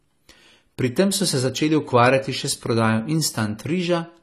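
From the very start right through to the end, the speech carries what's most likely AAC compression, AAC-LC specifically. There's nothing at all above about 14.1 kHz, so the top end sounds shaved off and dull. The codec damage is plainly audible: the encoder throws away detail it judges you won't miss, and at a squeezed rate, consistent with roughly 32 kbps, the speech comes out smeared, with a fizzy, warbly edge on sibilants and held sounds.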